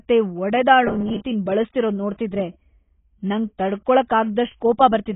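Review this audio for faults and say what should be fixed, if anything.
The speech is dull and band-limited throughout, with nothing above 3.8 kHz and a smeared, warbling texture on sibilants. The likely cause is heavy AAC compression, consistent with AAC-LC at a low bitrate around 16 kbps, where the encoder cuts the top band and starves the rest. Encode at 64 kbps or higher, or keep a lossless master.

From 0.88 to 1.24 s the speech turns into a rigid, metallic buzz at 200 Hz that still roughly follows the syllables. This is robotic sound from repeated short buffers, likely from a 5 ms chunk being replayed while roughly half of the real audio is skipped. Size the playback buffer and scheduling so new audio always arrives before the device runs dry.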